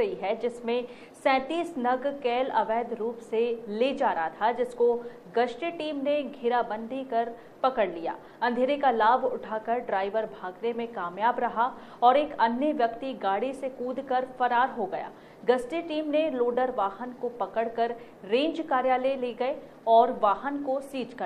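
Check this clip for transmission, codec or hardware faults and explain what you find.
No faults detected.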